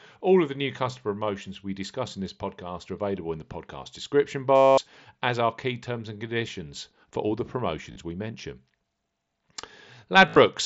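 At 4.55 s, right after "in the podcast description", there's concealed Bluetooth headset packet loss. About 225 ms of headset packets went missing, and the phone filled the gap by looping the best-matching recent stretch, so you hear a held buzzy tone at full level with a slight warble as "as are key terms" comes in. The 40 ms dropout at 7.92 s, after "conditions for all the", comes through as a short buzzy tone. At 10.27 s, losses scattered over 90 ms, the longest 45 ms, leave a brief buzz over the mSBC wideband sound.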